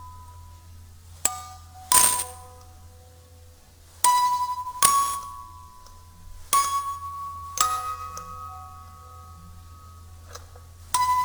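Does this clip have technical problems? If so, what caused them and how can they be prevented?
Yes. Sample clock jitter runs through the whole clip. The converter's clock wanders by around ten microseconds, so samples land early or late. Steep, loud and bright moments pick up a rough hiss, roughly 10 dB below the sound itself, which disappears in quiet gaps. A stable, low-jitter clock source prevents it.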